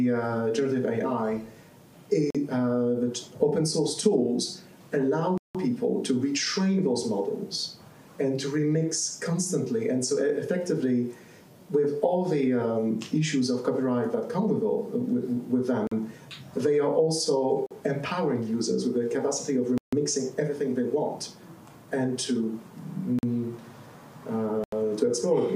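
Blocks of digital silence cut the audio seven times: roughly 43 ms holes at 2.30, 15.87, 17.66 and 23.19 s, an 85 ms hole at 24.64 s, and longer dropouts of about 170 ms at 5.38 s and 150 ms at 19.78 s. Each cuts out and back abruptly, with no fade. The 43 ms blocks and their multiples fit 2048-sample buffers at 48 kHz not being filled in time.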